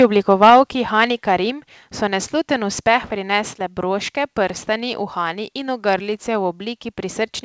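From 0.0 to 0.6 s the loudest syllables crackle harshly. This is microphone overload, likely from an input volume set too high. Peaks drive about 6 dB past the converter's limit. Their tops are flattened, and about 4 percent of samples are clipped.

At 0.5 s the microphone volume steps down by about 3 dB, and the voice and background drop together. At 1.5 s it steps down again, by about 4 dB, just before "so nesluten uspeh". Each drop is abrupt, likely the call software cutting input gain after those clipped peaks. The sound through the call path has nothing above 8 kHz.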